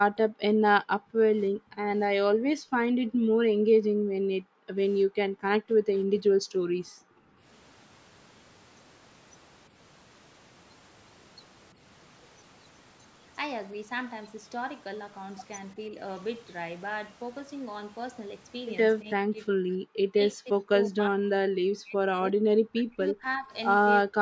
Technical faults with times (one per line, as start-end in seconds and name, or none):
0.04-7.46 speech suppressed in double talk
9.69-9.75 speech suppressed in double talk
11.73-11.81 speech suppressed in double talk
15.75-15.97 speech suppressed in double talk
19.01-23.53 speech suppressed in double talk
24.05-24.20 speech suppressed in double talk